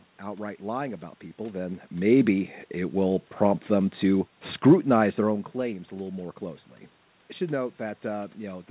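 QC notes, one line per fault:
No faults found.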